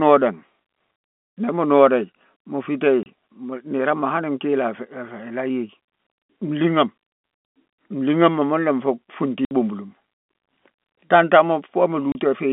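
At 3.03 s the sound drops out for 30 ms. At 9.45 s a 60 ms gap follows, ending at 9.51 s. At 12.12 s another 30 ms gap runs to 12.15 s. This is packet loss filled with silence. Packets went missing, and the receiver played nothing in their place. The gap lengths point to 30 ms packets, with two lost in a row at 9.45 s. Each hole starts and stops abruptly. All of it sits inside the narrow telephone band of the G.711 line.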